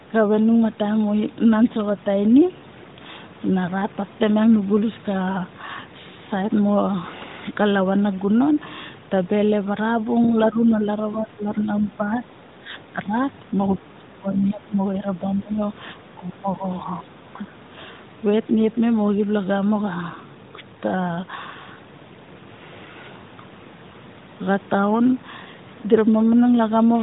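At 14.34 to 14.39 s, a faint, brief scrap of other side's voice leaking through appears, well below the talker. Likely an incomplete echo cancellation.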